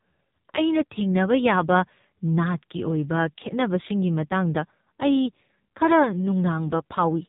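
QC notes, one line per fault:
throughout, AMR narrowband mobile codec: heavy low-bitrate speech coding, which fits about 5.9 kbps, strips everything above 3.8 kHz, leaving speech muffled, buzzy and synthetic.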